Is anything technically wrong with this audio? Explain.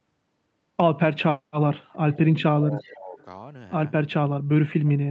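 Yes, there are two related problems in this speech.

Echo leak appears three times: 2.13 to 2.19 s, 2.83 to 2.90 s, and 3.19 to 3.25 s. Each is a brief, faint ghost of the speech trailing about 337 ms behind the original, roughly 30 dB below it in the first two and roughly 35 dB below in the last. The likely cause is a far end playing the call over a loudspeaker, where the echo canceller failed to scrub every trace of that playback from its microphone and sent the leftover back.

Speech suppressed in double talk runs from 2.58 to 3.18 s, about 0.7 s in total. The speech sinks noticeably, at its deepest by around 20 dB, and comes through weakened and patchy. This is likely the echo canceller reacting to both sides talking at once. Unable to tell the local talker from loudspeaker echo, it pulled the level down on everything. The second echo scrap sits inside this dip.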